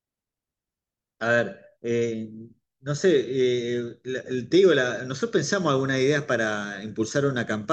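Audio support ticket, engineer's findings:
Speech dulls from 5.97 s to end of clip, with gritty noise. Bluetooth SBC bit pool drop: fewer bits starve top sub-bands and coarsen the rest, consistent with a drop from 31 to 15 (about 105 kbps). Continuous degradation, no gaps, unlike packet loss.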